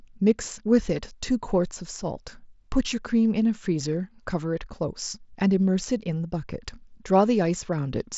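A speech clip with nothing technically wrong with it, heard through a Bluetooth mSBC headset link with no sound above about 7.7 kHz.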